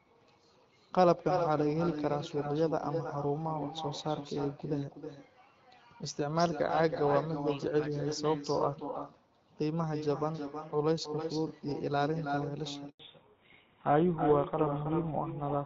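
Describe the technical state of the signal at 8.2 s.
At 8.2 s the speech carries an echo with no canceller, present throughout the clip: the far end's loudspeaker feeds its microphone, returning a thinner copy about 7 dB down, roughly a third of a second late. Unlike room reverberation, it is a distinct repeat rather than a smeared tail. The light AMR-WB coding at 12.65 kbit/s stays in the background.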